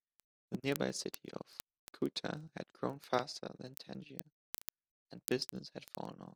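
From 0.13 s to 6.33 s the speech carries word clock ticks: an unlocked receiver slips about every 40 ms, losing or doubling one sample. Around two hundred sharp, uneven clicks result, shown as thin vertical spectrogram lines and tiny waveform steps.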